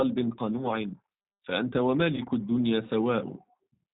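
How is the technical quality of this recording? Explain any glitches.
The recording is clearly degraded by low-rate codec coding throughout, plus two short dropouts.

Across the whole clip, the speech carries plainly audible G.729 codec damage, consistent with the 8 kbit/s G.729A variant. Each 10 ms frame is rebuilt from a vocal-tract filter, a pitch predictor and a few pulses, so nothing above 4 kHz survives and the voice turns rough and synthetic. Unlike plain band-limiting, the roughness comes from this sparse pulse modelling.

At 0.58–0.66 s and again at 2.15–2.21 s there is VoIP packet loss concealed by the speech codec. The first gap points to about 10 ms of lost audio and the second to about 20 ms. The decoder extends its last pitch and filter with falling gain, giving a brief, fading smear of buzz or coloured noise, and the speech stays weak until the decoder's frame-to-frame state recovers. 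A hard dropout would instead be silence or a click.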